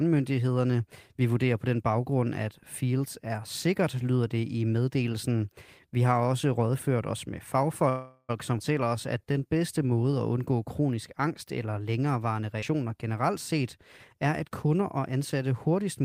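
A call audio freeze at 7.89 to 8.31 s, right after "også rådført os med", holds the last sound as a fading buzz or hiss for about 0.4 s, ending in roughly 30 ms of silence. The likely cause is delayed packets draining the jitter buffer. The speech then resumes where it stopped, with nothing lost.

A skip ahead at 8.6 s jumps forward, dropping roughly a tenth of a second of speech. The audio was dropped in transit or by an overflowing jitter buffer while later audio was already waiting, so the two sides are joined almost directly.

A jitter buffer slow-down from 8.84 to 9.91 s, leading into "at undgå kronisk angst", runs at 90% speed. The receiver repeated pitch periods, adding 112 ms to rebuild its reserve, which draws sounds out at unchanged pitch.

A second skip ahead at 12.6 s removes roughly 100 ms in the same way. It leaves an abrupt splice with a very brief filled gap.

A jitter buffer speed-up from 14.24 to 14.99 s, just after "generelt set", plays at 107% speed. 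About 70 ms of pitch periods were trimmed to reduce excess buffering, so the speech sounds slightly hurried at the same pitch.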